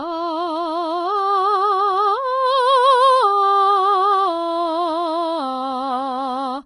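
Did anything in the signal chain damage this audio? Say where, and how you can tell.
Yes, the damage most likely happened at the codec stage, from low-bitrate Vorbis compression applied across the whole music clip. Nothing is audible above 10.6 kHz, and the remaining treble sounds hissy and grainy. The codec cut the high band and quantised what was left so coarsely that fine detail turned into noise of similar energy. Tones come out roughened and attacks are smeared, which fits a bitrate around 29 kbps.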